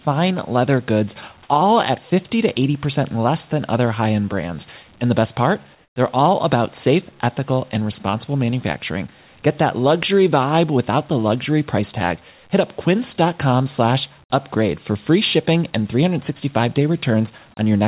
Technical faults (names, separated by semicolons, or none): comfort noise in place of the background